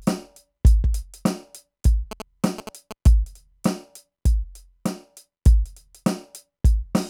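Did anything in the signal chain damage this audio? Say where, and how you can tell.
Yes. Between 2.11 s and 3.07 s the music picks up GSM signalling bursts, a galloping dit-dit-dit of short buzzes pitched at about 217 Hz, sitting roughly 15 dB below the music. The damage is in the analogue wiring: a nearby 2G phone exchanging brief signalling traffic radiates RF pulses, and a junction in the audio circuit rectifies them, turning the 217 Hz burst envelope into audible interference.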